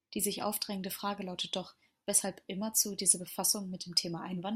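Nothing in this short speech recording stands out as a technical problem, so there's nothing here to flag.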